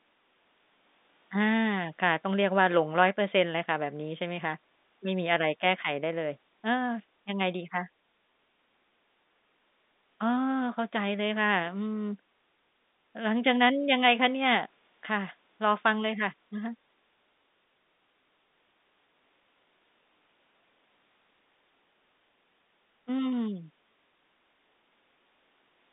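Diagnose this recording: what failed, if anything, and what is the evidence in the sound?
Nothing failed: the sound carries no evidence of a fault, only the ordinary narrow band of a G.711 telephone line.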